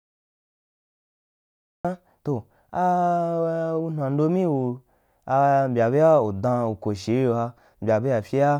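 Cut-off start at 1.85 s: the recording began late, so digital silence gives way abruptly to speech already underway, with no natural onset.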